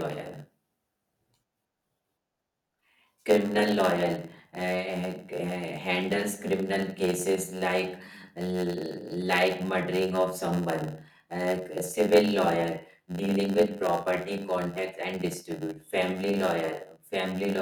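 Speech, with a block size mismatch (padded) running throughout: each short block is zero-filled to the larger size the next stage expects, putting a brief gap in every block. That produces a steady 91.9 Hz buzz and slows delivery to 0.919 times normal speed, with the timbre kept.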